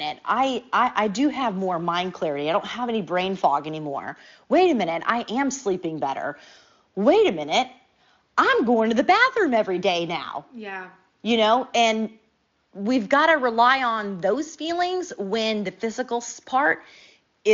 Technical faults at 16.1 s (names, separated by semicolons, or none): none